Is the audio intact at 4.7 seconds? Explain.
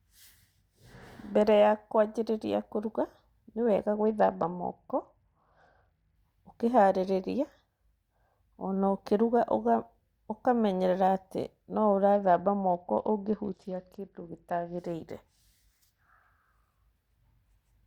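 No. From 3.95 to 6.16 s the speech turns dull and gritty, its treble gone and a rough noise riding underneath. This is a Bluetooth SBC bit pool drop: the encoder, starved of bandwidth, gave the upper sub-bands almost no bits and quantised the rest coarsely. The sound fits a fall from a bit pool of 31 to 9, near 72 kbps.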